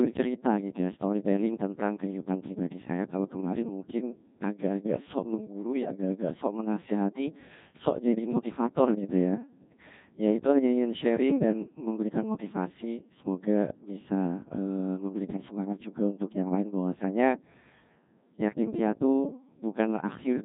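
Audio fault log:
Throughout: Codec 2 vocoder. The speech has the robotic, buzzy quality of a very low-rate vocoder, heavily damaged, with nothing above 3.8 kHz, which fits Codec 2 at around 1.6 kbit/s. Only pitch, voicing, energy and a coarse spectral envelope survive, and the decoder rebuilds the voice from summed sine waves. On a spectrogram, harmonics look unnaturally regular and smeared, with a hard ceiling at 3.8 kHz. The waveform no longer matches the original shape.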